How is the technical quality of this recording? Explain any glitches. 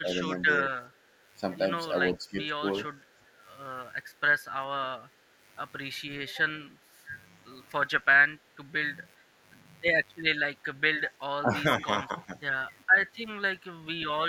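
The speech carries a constant mains buzz and several brief level disturbances typical of a speakerphone call passed through an echo canceller.

Mains buzz runs through the whole recording, about 30 dB below the speech. Sharp switching spikes picked up from the 50 Hz supply, twice per cycle, create a ladder of harmonics climbing into the kilohertz range, so it sounds like a raspy buzz rather than a smooth hum.

Speech suppressed in double talk appears from 0.01 to 3.32 s, at 7.06 to 7.11 s, at 9.21 to 9.27 s, and from 10.98 to 12.39 s. The voice dips by up to roughly 15 dB in short pieces, likely because the echo canceller attenuated everything while both ends spoke at once.

Echo leak occurs from 0.22 to 0.34 s. A faint copy of the speech, around 30 dB down, returns 414 ms late. This is likely loudspeaker sound at the far end that the microphone picked up and the canceller failed to fully remove.

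Background gated by the echo canceller affects 1.05 to 1.12 s (about 11 dB), 5.08 to 5.39 s (about 6 dB) and 8.38 to 8.58 s (about 8 dB). The room sound ducks briefly while the canceller clamps the microphone during loudspeaker playback, then returns when it releases.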